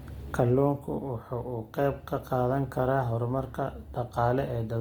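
Throughout the speech, the encoder was short of bits, most likely from Opus compression in its music (CELT) mode at a rate that sounds like roughly 24 kbps. Bands it couldn't fully code were filled with folded copies of lower bands or with noise, so the damage is plainly audible: voiced sounds turn grainy, rough and noisy. The bandwidth stays wide, with content reaching about 20.2 kHz, so the sound is not muffled.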